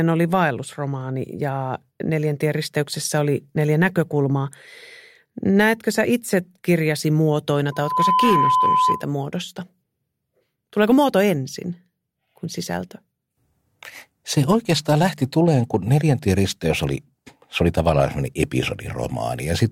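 Right after "sä itse kirjasi muotoina", at 7.72 s, loudspeaker feedback squeal begins. A microphone is hearing its own loudspeaker, and the loop gain tops one at 1 kHz. That tone swells within about a third of a second, sits roughly 5 dB above the speech, and stops at 9.07 s.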